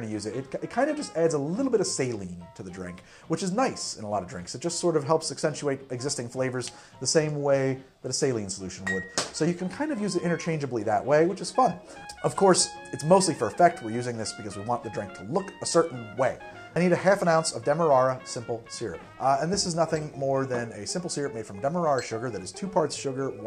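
No technical faults can be heard in this clip.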